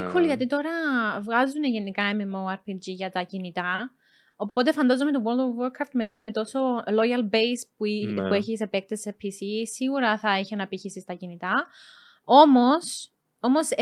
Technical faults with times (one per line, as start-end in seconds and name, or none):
3.75-3.80 short stall from a late packet
4.30-4.58 short stall from a late packet
6.02-6.30 call audio freeze
12.19-13.82 jitter buffer speed-up